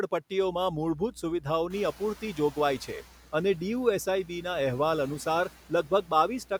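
From 0.38 s to the end of the clip there is mains hum: a steady 60 Hz tone with low harmonics, sitting roughly 10 dB below the speech. A ground loop or a nearby transformer is feeding the power-line frequency into the signal path. The result is a continuous low drone under the speech that does not change with it.

At about 1.5 s the room's background noise rises by about 15 dB, and from 1.70 s to 3.03 s the noise suppressor is catching up. Its noise estimate trails the new level, so the louder background passes through with little reduction at first. Over about 1.33 s the estimate adapts, and the noise sinks by about 6 dB to a steadier floor.

Three passages show speech cut by the noise suppressor: 1.92 to 2.57 s, 2.79 to 3.33 s, and 5.50 to 6.11 s. The suppressor misreads low-level speech as background and attenuates it along with the noise, by up to about 12, 13 and 12 dB respectively. 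In the first two passages roughly a third of a second of speech is affected, and in the third somewhat more. Soft consonants and word endings there sound swallowed or faint. The first two cuts fall within or overlap the period when the suppressor is still adapting to the raised noise.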